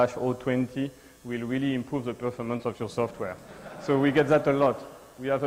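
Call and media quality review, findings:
Short concealed packet loss, 2.57 to 2.61 s: brief smear or wobble. About 20 ms of audio missed the decoder, 18 ms of it synthesised by receiver concealment extending the preceding sound, then cross-faded back into the received stream. Component: receive-side decoder PLC.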